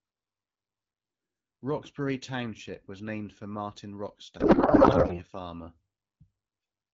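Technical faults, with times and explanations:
4.39–5.23 s: codec payload misread. Octet-aligned AMR frames decoded as bandwidth-efficient scramble the fields, so the speech becomes garbled, warbling noise. A spectrogram shows smeared, unstructured energy.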